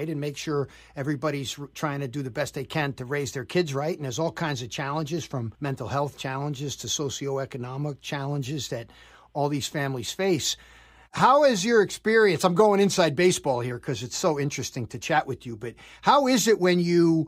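No technical faults are audible.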